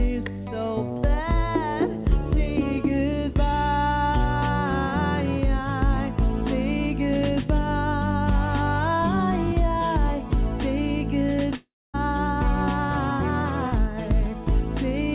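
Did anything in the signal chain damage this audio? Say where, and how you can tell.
Yes. Around 11.56 to 11.96 s the sound smears into a fading buzz, drops to silence, then resumes with a chunk missing, likely a long network dropout.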